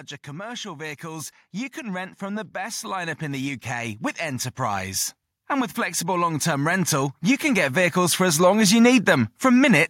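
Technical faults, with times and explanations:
0.27–8.95 s, automatic gain rising: the level control keeps lifting gain on quiet input, about 18 dB overall, so speech and background noise swell together.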